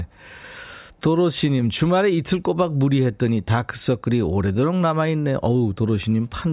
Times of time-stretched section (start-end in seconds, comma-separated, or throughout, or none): none